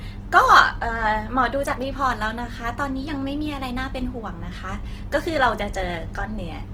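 Opus compression damage runs throughout this speech clip, from start to finish, and it is plainly audible. The sound turns rough and grainy rather than swirly, with a noisy texture where cleaner tonal detail should be. That fits the encoder's music mode working at a low rate, around 16 kbps, likely forced to rebuild starved bands with folded or noise-filled content. The bandwidth stays wide, reaching about 20.2 kHz, so the harm shows up as grain, not muffling.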